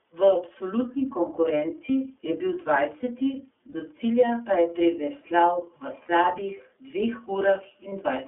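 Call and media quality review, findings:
iLBC codec, whole clip. Narrowband speech, nothing above 3.4 kHz, little below 250 Hz. Rough, slightly synthetic texture, plainly audible. Each frame's excitation is coded on its own, at a low rate that fits iLBC's 13.33 kbps mode with 30 ms frames.

Lost iLBC frames at 1.86 s (just before "je bil"), 3.72 s, 6.02 s and 7.89 s. Brief held, buzzy vowel-like fill lasting 30 ms, or 60 ms at 6.02 s. Fits one lost frame, two at 6.02 s. The decoder repeats the last pitch cycle with noise, then recovers immediately.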